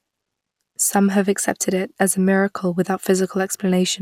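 Throughout the speech, generation loss is audible: a swirly, hollow smear with blurred consonant attacks. It is likely caused by about four passes through an MP2-type codec near 128 kbit/s. A spectrogram shows accumulating noise and a hard ceiling at 18.1 kHz.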